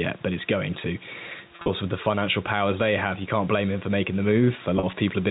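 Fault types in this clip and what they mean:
Gain pumping: background noise swells by a few decibels in pauses and ducks under louder speech, likely from a limiter on overdriven gain; the waveform envelope visibly breathes.
Packet loss with pitch repetition: repeated pitch periods bridge gaps of up to 40 ms near 1.6 s and 4.8 s, sounding buzzy; spectrograms show frozen harmonic stripes.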